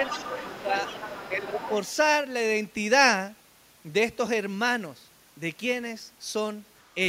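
From 0.03 to 1.46 s a second voice sits about 10 dB under the speech: the other side's voice leaking through, likely loudspeaker playback that the echo canceller left in the microphone signal. It returns from 1.62 to 1.93 s at a similar level, and as a very faint trace from 6.79 to 6.88 s.

During that overlap, at 0.46 to 0.74 s and 1.31 to 1.7 s, the speech itself dips by up to roughly 10 dB. This is speech suppressed in double talk, likely the canceller attenuating everything because it could not separate the talker from the echo.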